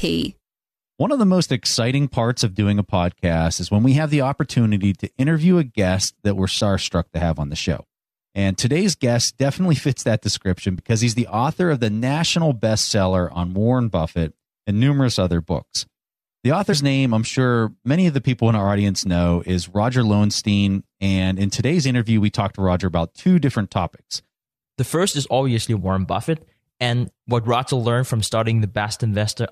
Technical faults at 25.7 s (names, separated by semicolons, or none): none